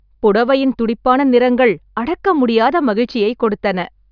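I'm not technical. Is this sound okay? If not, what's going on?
Yes, nothing in this recording goes wrong at any point, so there's no problem here to worry about.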